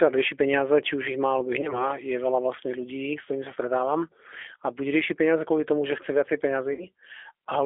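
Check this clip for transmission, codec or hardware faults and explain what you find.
The speech passes through a low-bitrate voice codec for its whole length, and two short dropouts were patched over by that codec's loss concealment.

G.729 codec, throughout: the speech is rebuilt from a vocal tract filter, a pitch predictor and a few pulses per 10 ms frame, which points to the 8 kbit/s G.729A variant. Energy is confined to roughly 300 Hz to 3.4 kHz, so the sound is thin and muffled. The modelling damage is plainly audible as a rough, slightly synthetic texture.

VoIP packet loss concealed by the speech codec, at 1.61 to 1.85 s and 6.73 to 6.87 s: the first follows "ich má alebo ich" and the second follows "tomu že chce viacej". About 20 ms of audio went missing in the first, which fits one lost packet, and about 60 ms in the second, which fits three. Each time the decoder extended its last pitch and filter state while lowering the gain, so the sound stretches into a buzzy tone or a coloured noise that fades. 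Because every frame builds on the one before, the distortion persists past the gap itself, to about 1.85 s and 6.87 s.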